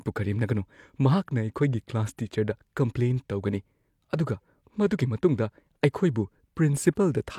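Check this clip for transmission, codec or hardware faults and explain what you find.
No faults can be heard.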